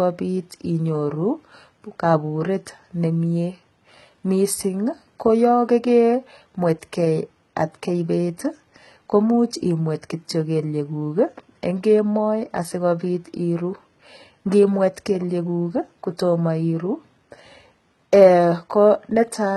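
Throughout the speech, heavy HE-AAC compression is likely: treble rebuilt from lower bands makes sibilants gritty and metallic, unlike a plain low-pass, with nothing above 11.9 kHz.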